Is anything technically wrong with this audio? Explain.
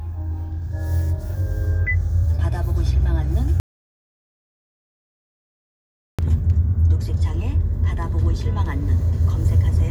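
Yes. An audio dropout to silence runs from 3.6 s to 6.19 s, removing about 2.59 s of material. The sound stops abruptly mid-flow and returns just as abruptly, with nothing in between: no room tone and no noise floor, only silence. That points to the input being lost while the recorder kept writing empty samples, likely from a momentary disconnection, failed link or accidental mute. Whatever occurred during that stretch is unrecoverable.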